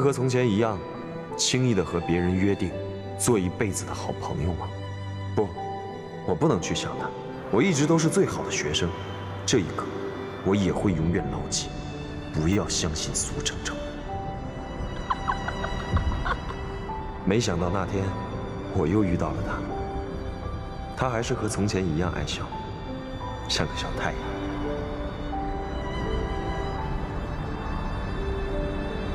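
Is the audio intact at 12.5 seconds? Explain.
No. From 12.53 to 12.56 s there is a repeated buffer: new audio arrived late, so a 10 ms buffer was replayed three extra times with a hard join at each repeat. The result is a brief buzzy click, and essentially nothing is lost.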